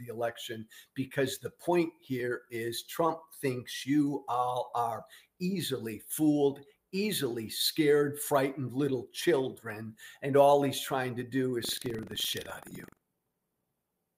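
From 11.61 to 13.97 s the sound carries a steady robotic rattle at 23.4 Hz, the signature of buffer tearing: writer and reader cross inside each period, which fits a 2048-sample buffer, splicing in roughly a tenth of audio about 100 ms stale. Unlike underrun dropouts, nothing goes silent.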